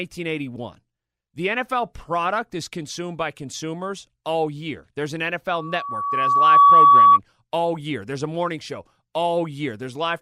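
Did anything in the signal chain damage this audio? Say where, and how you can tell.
Yes. A loudspeaker feedback squeal arises at the analogue end, where the microphone picks up its own loudspeaker. From 5.53 s a 1.1 kHz tone swells over roughly a second to around 15 dB above the speech, ending at 7.19 s, just before "all year". Loop gain exceeded one there.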